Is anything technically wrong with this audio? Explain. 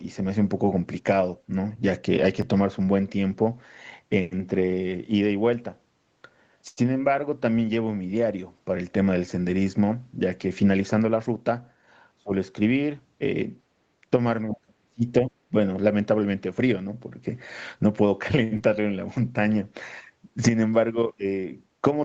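Yes, there are several call-transmission faults in this speech clip, which reaches up to 8 kHz through the Opus call path.

A short stall from a late packet occurs at 6.68–6.79 s and again at 18.44–18.53 s. The jitter buffer ran dry, so the last sound is held for about 87 ms and then 72 ms before resuming. Unlike concealed loss, nothing is skipped; a sound just lingers.

A jitter buffer speed-up runs from 11.05 to 11.51 s. Around 50 ms of pitch periods are cut to shrink the backlog, so the speech is hurried at about 111% speed while the pitch stays the same, which separates it from a sped-up recording.

Speech is suppressed at 12.18–12.33 s, dipping by roughly 25 dB, and across 14.50–15.55 s, where the level drops by up to roughly 35 dB in pieces over most of that stretch. The likely cause is double talk, where the echo canceller turned down the talker while the far end spoke. These are level dips rather than smears or held sounds.

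A short concealed packet loss follows at 18.57–18.62 s. About 60 ms never arrived and was covered by 28 ms of continued sound, leaving a brief smear or wobble. Unlike the stalls, some audio is genuinely gone here.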